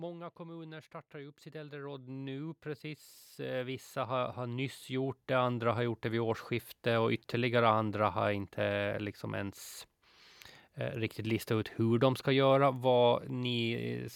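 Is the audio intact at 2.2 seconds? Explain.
No, at 2.2 s the automatic gain rising is still underway, from 0.36 to 2.67 s. The gain control lifts level by about 10 dB, so voice and background swell together.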